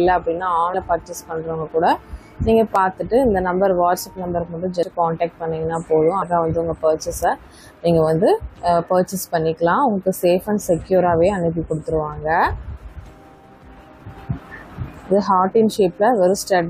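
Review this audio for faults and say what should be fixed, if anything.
There are compressed frames skipped at 0.73, 4.82, 6.21 to 6.23 and 14.83 s. Chunks of roughly 100 to 200 ms vanish, so the audio jumps forward with a soft smeared blip rather than a click, since overlapping frames blur the join. Each jump fits a few dropped frames of about 23.2 ms each. Check file integrity and transfer so damaged or missing frames don't reach the decoder.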